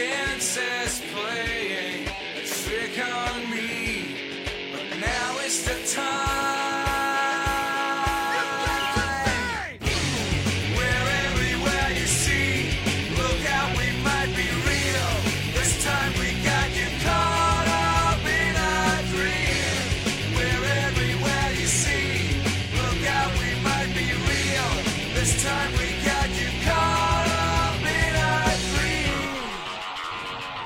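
The audio has two kinds of fault. AAC frame loss with concealment produces brief smeared, noisy patches at 11.27 s, 22.62 s and 27.70 s, lasting about 43 ms, 85 ms and 43 ms. The lengths fit one, two and one lost frames. The decoder patches each gap by re-using the last good spectrum, so the sound turns phasey instead of dropping to silence, which sets it apart from a plain dropout. None of the losses runs long enough to fade out. From 14.50 s to 16.12 s a GSM phone buzz sits about 21 dB below the signal. It is a hard, raspy tone at 217 Hz, rich in harmonics and nearly steady, which fits a nearby 2G handset on a call whose burst transmissions are rectified in the audio circuit. Its 217 Hz rate and rasp distinguish it from the smoother 50 or 60 Hz of mains hum, and it bears no relation to the programme.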